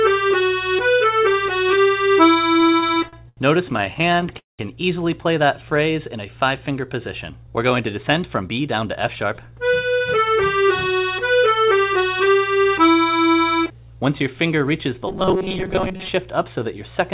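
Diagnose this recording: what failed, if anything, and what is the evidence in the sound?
Repeated stalls (stutter) come from the network and jitter buffer stage. Between 2.54 and 3.39 s there are ten short hitches, the longest 84 ms, and about a quarter of that span is filled-in sound. Between 3.77 and 4.32 s ten more follow, none over 12 ms. Packets arrived late. The receiver stretched the last sound each time, so the audio drags without losing anything.

A call audio freeze follows at 4.38 to 4.61 s. The sound holds and fades, then leaves 160 ms of silence before resuming where it stopped. It adds 210 ms of delay. The likely cause is held-up packets that emptied the jitter buffer.

A jitter buffer slow-down occurs from 5.45 to 5.78 s. The audio runs at 89% speed with unchanged pitch, and 43 ms is added. The buffer was low, so it repeated single pitch periods to rebuild its reserve. The result is drawn-out sound.

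A jitter buffer speed-up runs from 7.81 to 9.42 s. The audio plays at 107% speed, pitch unchanged, and sounds hurried. About 150 ms is cut out in small pitch-period pieces. The buffer was holding too much audio and was trimming its delay.

Robotic sound from repeated short buffers appears between 15.07 and 16.09 s. A rigid, metallic 188 Hz buzz replaces most of that span. A 5.3 ms piece is likely being repeated because new audio arrived too seldom. Throughout, the band stops at 4 kHz, which fits a G.711-type call codec.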